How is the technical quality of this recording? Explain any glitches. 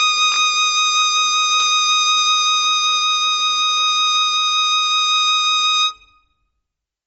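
The technical quality is noticeably compromised, with a constant coding artefact and two brief scrambled glitches.

Throughout, the music sounds grainy and breathy, with nothing above about 7.8 kHz. This is likely Bluetooth LC3 compression at a low bitrate, which strips the upper spectrum and fills it with noise.

From 0.32 to 0.36 s and from 1.54 to 1.62 s, the sound jumbles. These are chunks out of order: 20 ms pieces play one and three chunks late, creating hard joins.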